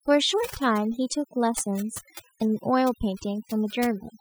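Throughout, the background drops to near silence with twinkling specks: overdone noise removal, switching off bands near the noise estimate.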